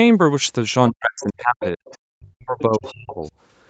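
A short speech recording over a call shows speech suppressed in double talk from 0.9 to 1.81 s and 2.13 to 3.23 s, likely an echo canceller ducking both talkers, seen as waveform gaps dropping about 40 dB. The other side's voice leaking through appears as bursts at 1.2, 1.62, 1.88, 2.86 and 3.24 s, roughly 10 to 35 dB below the talker: spectrogram smears likely from incompletely cancelled echo.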